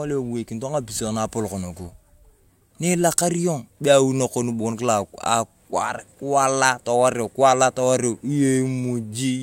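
No technical faults can be heard anywhere in this recording.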